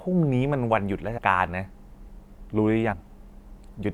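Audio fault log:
1.17 to 1.19 s and 2.92 s, compressed frames skipped. About 100 ms, then about 70 ms, of sound drops out, which fits roughly four and three 26 ms frames. Overlapping frames smear each join into a brief blip.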